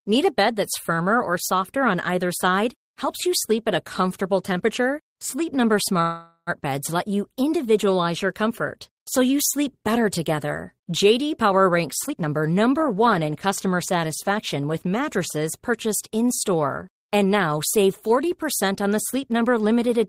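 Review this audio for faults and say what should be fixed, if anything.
A call audio freeze fills 6.01 to 6.50 s with a fading buzz or hiss ending in 40 ms of silence, likely from delayed packets. Speech then resumes 455 ms late, with nothing lost.

Jitter buffer speed-up trims pitch periods to drain excess delay. At 11.89 to 12.43 s speech runs at 130%, roughly 150 ms removed. At 14.29 to 14.61 s, between "in customer" and "with mattresses purchased", it runs at 110%.

Fix the network path's delay spikes and let the jitter buffer adapt more gradually, so it neither runs dry nor has to catch up abruptly.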